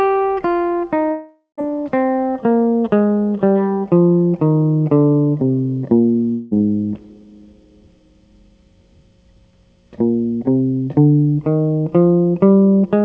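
A long network dropout at 1.12–1.59 s and again at 6.31–6.53 s: music stops arriving, likely from lost packets. The receiver stretches the last sound into a fading buzz, reaching silence for the final 0.13 s of the first gap but not in the 0.2 s second one, then resumes with the missing music skipped. Throughout, nothing is heard above 8 kHz, which fits a wideband call codec.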